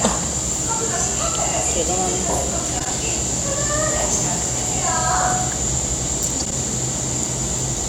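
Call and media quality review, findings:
Frames out of order, 2.79–2.90 s: brief garbled flutter. Two adjacent 52 ms blocks swapped in the receive path, which fits pairs of frames around 26 ms each. No time lost, unlike a dropout or concealment gap.

Frames out of order, 6.39–6.52 s: same swapped-halves flutter, same block size. Recurring reordering rather than packet loss, because nothing is missing or smeared.

Loudspeaker feedback squeal, 4.44–5.65 s: single 738 Hz tone swelling over roughly 0.7 s to about 5 dB above the audio. The mic hears its own speaker and loop gain exceeds one. It grows and then stops, unlike steady hum or whine.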